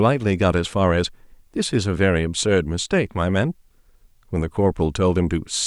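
No technical faults can be heard in this speech recording. There is nothing to place on a timeline.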